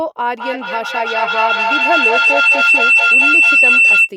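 Feedback howl runs from 0.37 to 4.13 s. The loudspeaker-to-microphone loop adds gain on each pass, so the repeats swell instead of decaying and narrow to a tone around 3 kHz. It pulses roughly every 200 ms and peaks about 9 dB above the speech.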